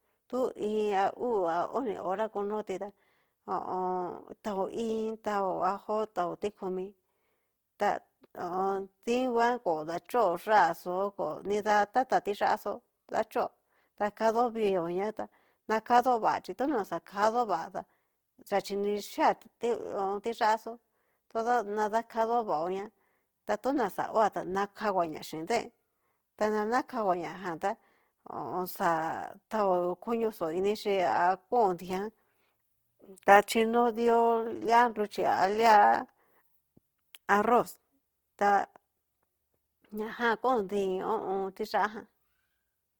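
A speech clip carrying Opus compression throughout, likely from an encoder starved of bits in its music-oriented CELT mode, at a rate the sound suggests is around 16 kbps. With too few bits, the codec preserves each band's overall energy but fills in the fine detail with folded or noise-like content. The voice therefore sounds grainy and rough across its whole range rather than dull, since the bandwidth stays full, reaching about 20.1 kHz.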